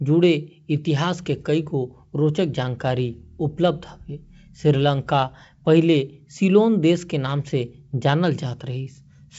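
No technical faults can be heard in this speech recording. It comes through G.722 wideband telephone coding, with nothing above about 7.7 kHz and at most a faint trace of the coding, which fits the full 64 kbit/s mode.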